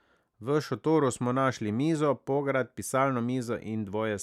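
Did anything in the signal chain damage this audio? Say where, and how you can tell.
No, nothing along the chain left a mark here; the speech comes through with nothing in it that points to a problem at any stage.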